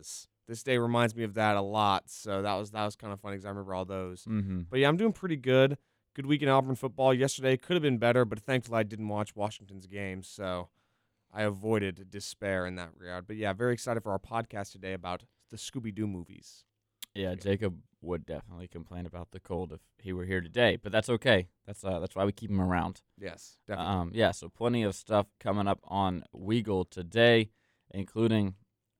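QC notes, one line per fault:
No faults heard anywhere in this speech recording.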